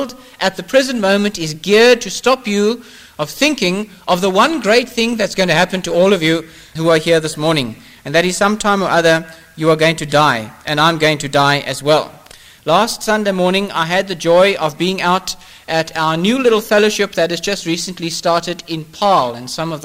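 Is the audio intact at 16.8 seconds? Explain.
Yes, the audio at 16.8 seconds is intact, with no dropout, click, distortion or other fault at that moment.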